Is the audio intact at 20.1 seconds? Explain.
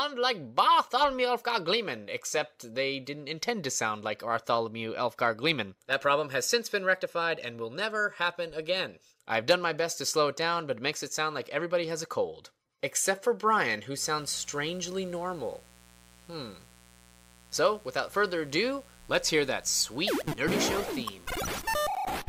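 No, 20.1 s falls inside a stretch of mains buzz running from about 13.94 to 21.94 s. It's a steady, raspy buzz sitting something like 25 dB under the main signal. The rasp comes from sharp switching spikes getting into the signal path, the kind a dimmer, a rectifier or a missing shield lets in, twice per cycle of 60 Hz mains. That gives a stack of harmonics climbing up into the kilohertz range.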